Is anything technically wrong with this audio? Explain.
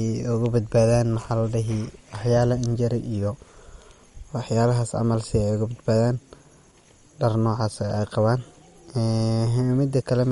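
Yes. Throughout the speech, nothing is heard above 11.2 kHz, and a watery swirl is plainly audible. This is likely MP3 compression at a low bitrate, around 48 kbps. Short of bits, the encoder cut the treble and dropped weak frequency lines that flicker between frames.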